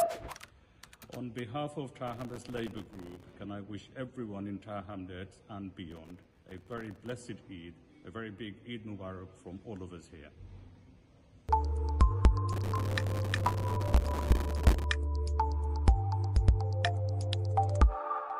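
Three times, from 2.07 to 3.33 s, 5.91 to 7.12 s and 12.53 to 14.84 s, the processor misses deadline after deadline for tiny buffers of around 1.5 ms. Each miss leaves a hard-edged silent gap, heard as processor overload crackle, a gritty tearing across the sound.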